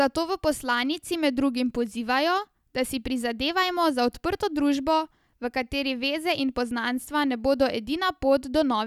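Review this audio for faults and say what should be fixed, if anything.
No faults are audible; nothing needs fixing.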